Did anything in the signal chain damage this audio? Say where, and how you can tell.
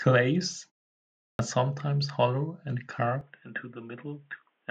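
Yes: a clipped start after a pause at 1.35 s, where playback wakes late and swallows 41 ms of onset.

From 3.21 s, nothing above 3.8 kHz, level about 5 dB lower, new background noise: likely input switched to a poorer device.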